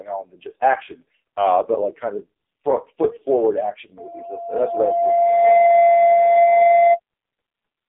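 Speech, passed through an AMR narrowband mobile codec for its whole length. The band runs from about 300 Hz to 3.6 kHz, and nothing survives above 3.8 kHz. Codec damage is heavy. The voice sounds buzzy and synthetic, which fits a very low bitrate near 5 kbps. From 3.97 s to 7.0 s a loudspeaker feedback squeal appears. A steady 687 Hz tone swells over roughly a second and a half. It ends up around 10 dB louder than the speech. A microphone is re-amplifying its own loudspeaker at that frequency.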